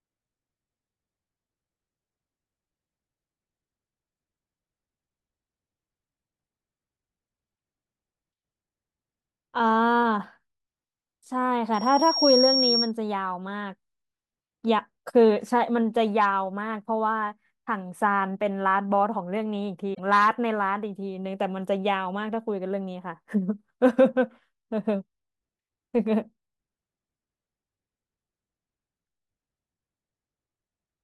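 Around 7.53 to 7.55 s there's a brief glitch where the speech breaks up. That's damaged data in the compressed stream. A patch of the encoded bytes went bad, so the decoder couldn't make sense of the frames there, lost sync and had to hunt for the next good frame header. The same thing hits again from 19.91 to 20.00 s, a noticeably longer blip of garbled decode before things lock back in.

Between those two, from 11.74 to 12.92 s, you get a loudspeaker feedback squeal: a thin, piercing tone at 5.6 kHz that swells over roughly half a second and sits a few dB above the speech. What's going on is a mic hearing the speaker it feeds, with the loop gain creeping past one at that frequency, so the tone keeps feeding itself until it's on top of everything.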